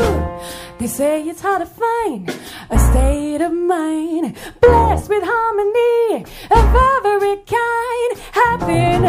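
No technical faults can be heard anywhere in the clip. Nothing in the audio stands out at any point as needing a time reference or closer inspection.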